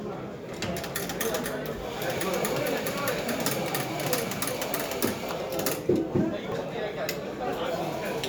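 At 1.44, 2.18, 4.28, 5.32, 6.52 and 7.58 s the everyday sound jumps forward, leaving no gap of silence. Each is a dropped buffer (overrun), likely caused by the program not collecting samples before the hardware overwrote them. A short stretch vanishes and the two sides butt together. The jumps at 1.44, 4.28 and 6.52 s are the largest, roughly 70 ms each. The others lose only a few tens of milliseconds.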